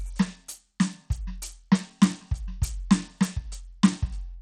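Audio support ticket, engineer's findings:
Throughout: plainly gritty, flickering treble; spectrogram shows a hard ceiling at 18.2 kHz with patchy upper bands. Likely Bluetooth SBC compression, starved bit allocation, fits roughly 80 kbps.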